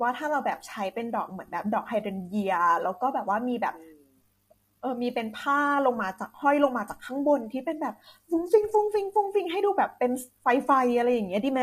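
From start to finish the speech sounds rough and grainy, with a fizzy noise sitting between the harmonics of the voice and a top band that feels thin and somewhat synthetic. The likely cause is low-delay AAC compression of the AAC-ELD kind used for video calls, at a rate that fits around 32 kbps. At that low bitrate the bits run short, so the damage is plainly audible.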